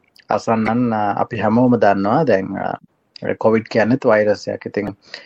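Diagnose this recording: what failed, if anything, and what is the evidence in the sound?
The codec stage is the likely culprit for the steady degradation: MP3 compression running short of bits, consistent with an encoder at around 64 kbps. Throughout the clip the sound has a watery, swirling texture as faint high components flicker in and out from one frame to the next. Sharp onsets are blurred rather than crisp, and the bright parts take on a metallic, chirpy edge.

The compressed stream was also corrupted in transit or storage, producing damaged data in a compressed stream at two points: 0.64 to 0.70 s and 4.85 to 4.90 s. Each lasts about 50 ms and is heard as a brief squawk or blip. Bad bytes caused the decoder to misread or reject frames, lose sync and skip ahead to the next valid frame header before normal playback resumed.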